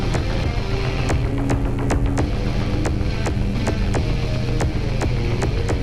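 A skip ahead at 0.43 to 0.45 s drops roughly 0.4 s of the audio without a gap, from loss in transit or jitter buffer overflow; waveform and spectrogram show an abrupt seam.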